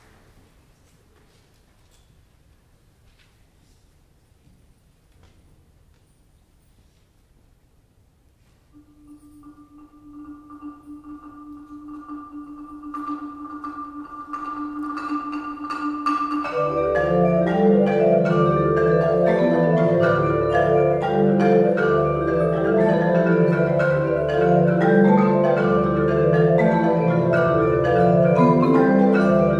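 Nothing stood out as a technical problem on listening.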